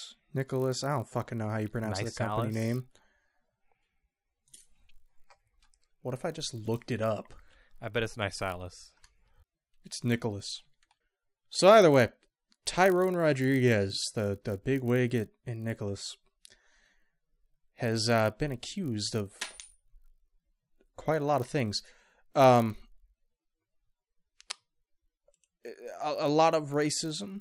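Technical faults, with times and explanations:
Throughout: resampler restarted on every block. Each 20 ms block was converted alone, which fits 24 kHz to 48 kHz, leaving edge errors heard as a 50 Hz buzz under the speech.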